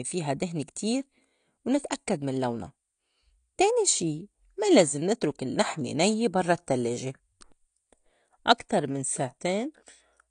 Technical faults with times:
0.00-10.31 AAC compression

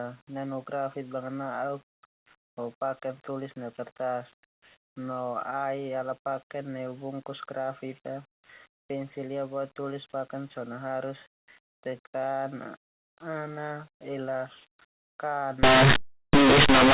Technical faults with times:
15.63-16.94 linear audio read as companded

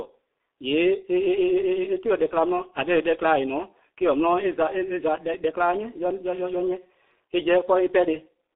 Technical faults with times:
0.00-8.56 G.723.1 codec

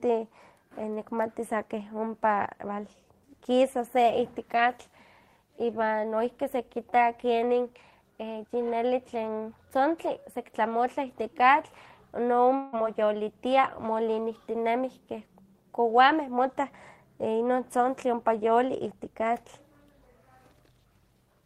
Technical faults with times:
12.55-12.76 long network dropout

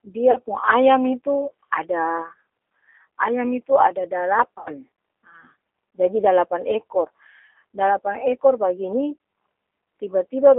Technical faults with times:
0.00-10.59 G.729 codec
0.31-0.38 VoIP packet loss concealed by the speech codec
4.58-4.72 VoIP packet loss concealed by the speech codec

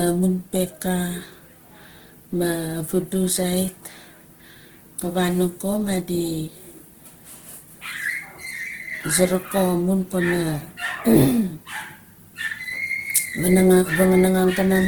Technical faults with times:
0.00-14.87 Opus compression

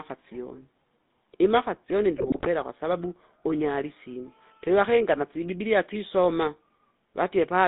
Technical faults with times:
0.00-7.67 GSM full-rate codec
2.14-2.48 GSM bit errors

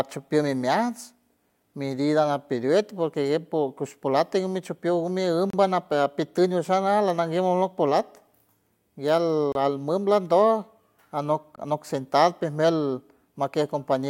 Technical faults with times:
5.50-5.53 gap between stream segments
9.52-9.55 gap between stream segments
11.56 gap between stream segments

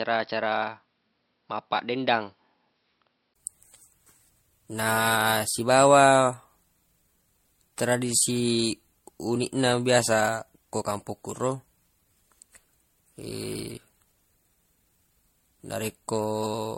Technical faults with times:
0.00-16.77 generation loss
0.00-3.36 input switched to a poorer device

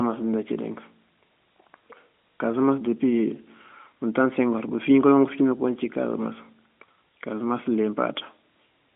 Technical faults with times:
none

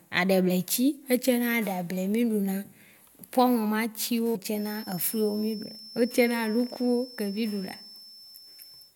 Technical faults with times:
4.51-8.95 feedback whistle

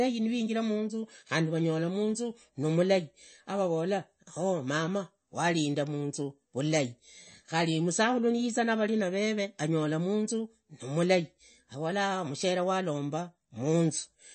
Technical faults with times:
0.00-14.34 MP3 compression

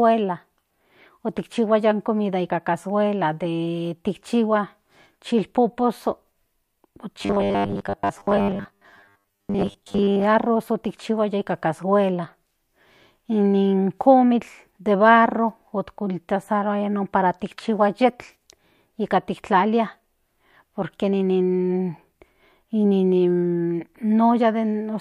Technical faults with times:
7.16-10.24 robotic sound from repeated short buffers

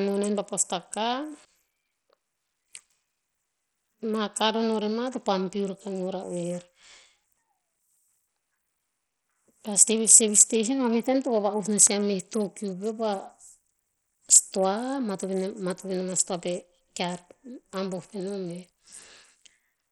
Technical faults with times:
0.00-19.91 Bluetooth SBC compression

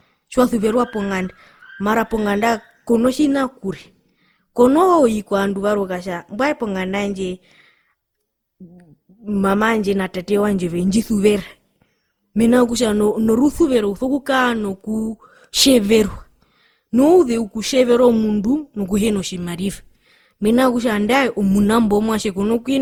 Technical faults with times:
0.00-22.82 generation loss

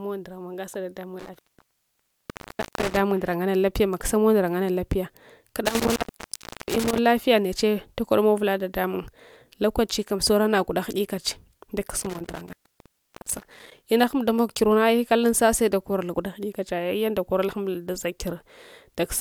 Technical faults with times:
1.19-2.99 intermittent contact
5.65-6.98 intermittent contact
12.00-13.72 intermittent contact

